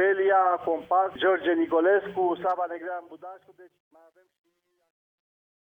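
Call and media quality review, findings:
Truncation distortion on the fade-out, 2.24 s to end of clip. Decay turns gritty from 2.24 s, worst 3.62 to 5.61 s. Probable component: gain or fade stage that truncates without dither, consistent with roughly 11-bit effective resolution. The low-level waveform collapses into a few coarse steps.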